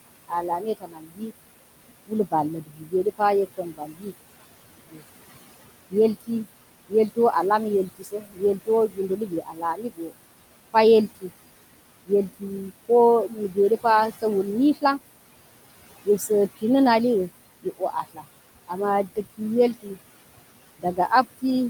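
Noise suppressor artifacts run through the whole recording. The suppressor pulls the steady background down by about 19 dB frame by frame. The room noise, which sits about 14 dB below the speech, therefore drops away in the gaps and comes back up under each phrase.

Speech cut by the noise suppressor first appears from 0.28 s to 14.83 s. Across that stretch the suppressor misreads quieter parts of the speech as noise and turns them down by as much as about 22 dB. These moments add up to around four seconds, and soft consonants and word endings sound swallowed. A shorter episode follows from 16.05 s to 16.63 s, with a drop of about 16 dB affecting only a brief fragment. From 17.62 s to the end of the clip the same cutting of low-level speech returns, with cuts reaching about 19 dB, so trailing sounds again turn faint against the background.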